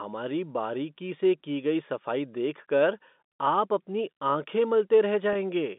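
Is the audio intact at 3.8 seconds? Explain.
Yes, at 3.8 seconds the audio is intact, with the speech running through its normal telephone-band G.711 coding and no fault at that moment.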